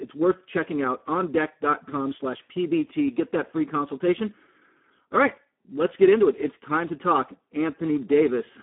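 Throughout, the speech is hoarse and stops near 3.8 kHz: heavy Speex codec damage, with too few excitation bits, fitting roughly 8 kbps.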